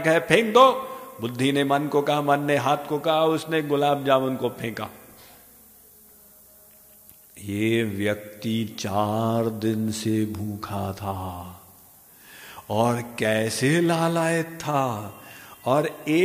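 Across the whole clip there is low bit depth with noise shaping: the audio is quantised to about 9 bits, and the rounding error is steered upward in frequency. The result is a constant thin hiss, roughly 25 dB below the signal, that climbs sharply toward the top of the band.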